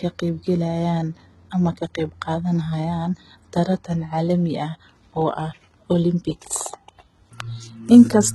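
Speech runs through heavy HE-AAC compression damage for the whole clip: the treble sounds bright but synthetic, and s sounds come out gritty and lispy, likely from spectral band replication rebuilding the treble from copied lower bands at a very low rate, one that fits roughly 16 kbps. On a spectrogram the upper region shows repeated, blocky patches whose harmonics fail to line up with those below the crossover, and everything stops sharply at 11.8 kHz.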